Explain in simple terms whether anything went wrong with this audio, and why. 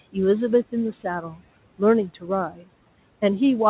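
Three short stretches of the speech suddenly go faint or sound swallowed, at 1.22 to 1.39 s, 2.09 to 2.29 s and 2.5 to 2.69 s, each lasting only a fraction of a second. This is speech cut by the noise suppressor. The call's noise-cleaning step mistook quiet parts of the speech for background noise, such as the faint room noise, and turned them down along with it.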